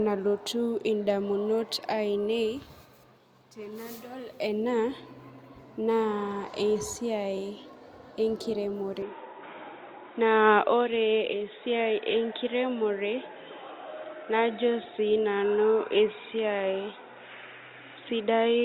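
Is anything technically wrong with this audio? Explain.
Yes. From 9.02 s to the end, the speech comes through what is likely an input switched to a poorer device. The narrower band cuts everything above 3.8 kHz, so the voice turns dull and boxy, with a faint new background noise. There is no gap at the change.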